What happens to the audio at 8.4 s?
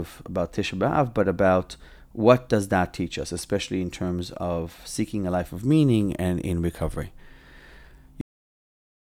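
A cut-off end begins at 8.21 s, so at 8.4 s there is only digital silence lasting until 9.15 s. The final stretch of audio was never written out, so the speech stops mid-sound and drops straight to silence with no natural decay.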